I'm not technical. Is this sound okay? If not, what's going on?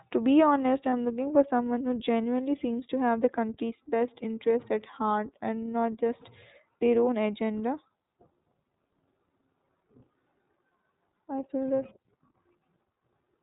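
No. The whole clip passes through the iLBC codec, a phone-call codec. It drops everything above 4 kHz, so speech sounds muffled, slightly rough and synthetic. There are lost iLBC frames at about 0.90 to 0.93 s, a 30 ms gap, which fits a single lost frame. The decoder fills it with a brief held, slightly buzzy or breathy vowel sound, then recovers at once.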